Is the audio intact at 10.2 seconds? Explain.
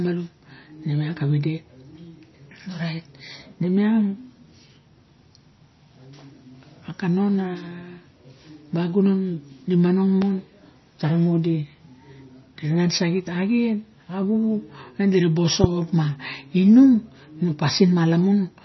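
No. From 10.22 to 10.25 s a loud pop sits on the speech. A sudden voltage step or pulse, likely from a plug, switch, static discharge or driver glitch, was added to the signal, and the downstream circuitry shaped it into a single sharp burst. It is heard as one abrupt pop, peaking roughly 10 dB above the speech, with the speech continuing underneath it.

MP3 compression also affects this moment. The encoder likely ran short of bits, with damage that fits a low bitrate around 24 kbps. It removed all content above 5.9 kHz and zeroed weak frequency lines that flicker between frames. The speech therefore sounds dull and watery, with swirling, metallic chirps on s sounds and smeared attacks.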